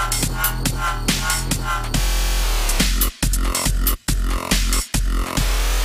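Nothing goes wrong anywhere in the audio, so there's no technical fault to point to.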